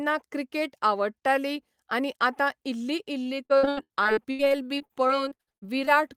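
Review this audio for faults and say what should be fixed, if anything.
From 3.23 to 5.89 s the speech breaks into repeated packet loss with a robotic sound. A rapid series of short holes, the longest about 79 ms, is patched by stretching the preceding sound, so roughly a quarter of that stretch is synthetic fill. The repetition of the last sound sets it apart from plain dropouts, which leave silence. Preventing it means a larger jitter buffer and forward error correction on the network link.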